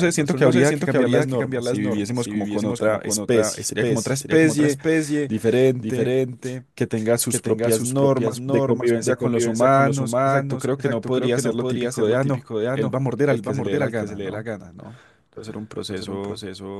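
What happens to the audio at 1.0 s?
At 1.0 s the speech carries a doubled audio track, present throughout: a full-band copy trails about half a second behind, a few dB quieter, with no decay or room colour. It is likely from a second, slower capture path. Spectrograms show each syllable's pattern repeated, offset in time.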